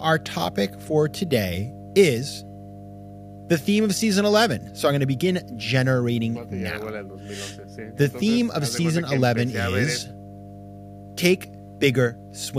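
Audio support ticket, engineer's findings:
Ground loop or nearby transformer coupling the mains supply into the signal path. Result: mains hum, a steady 50 Hz low tone with low harmonics, present throughout the speech, sitting roughly 15 dB below it. Check grounding, shielding and cable routing near power supplies.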